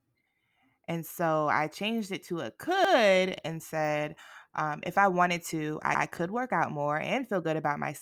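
A brief stutter repeats 100 ms of speech at 2.85 s after "changed it to a" and at 5.95 s before "could work out more": overlapping chunks, with each 3-second block restarting early.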